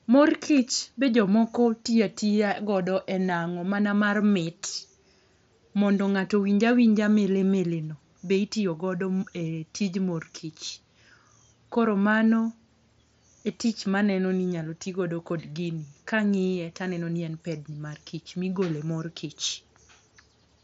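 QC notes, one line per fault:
No faults: speech comes over the Bluetooth mSBC headset codec, with content ending near 7.7 kHz and a light grain on louder passages that fits mSBC at about 61 kbps.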